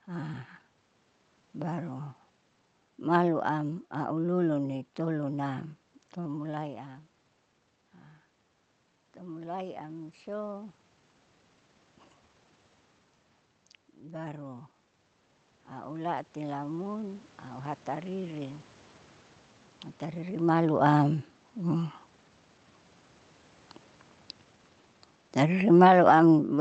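At 9.21 s the input drops by about 14 dB, and the automatic gain rising kicks in, lifting the gain by only about 3 dB until 10.83 s, so the speech and room noise swell together slightly. It comes back from 14.03 s to 20.35 s with a slower climb of about 6 dB, ending just before "malu am". From 25.52 s to the end, the automatic gain falling pulls everything down, and the speech and background sink together as the gain backs off.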